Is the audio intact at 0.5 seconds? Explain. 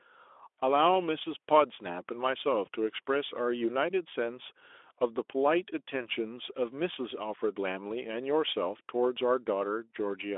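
Yes, the speech is intact at 0.5 s, with no fault at that moment beyond the light coloration of the Speex codec at 15 kbps on a telephone-width line band of roughly 300 Hz to 3.5 kHz.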